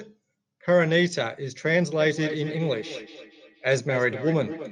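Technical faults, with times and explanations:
2.0–4.71 s, feedback echo between two devices: a second nearby device replays the sound and the first device's microphone recaptures it, giving distinct repeats about a fifth of a second apart, peaking about 12 dB below speech, unlike smooth room reverb.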